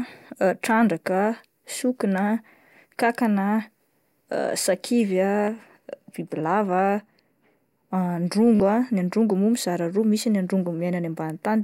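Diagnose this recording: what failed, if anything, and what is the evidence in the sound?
Bluetooth stutter on the wireless link: at 5.45 to 5.48 s, and at 8.56 to 8.60 s just before "ah androngo moa mizara", the speech repeats a short slice as a brief buzz, then resumes about 29 and 44 ms further on, which fits two and three lost packets. A plain dropout would fall silent instead of repeating.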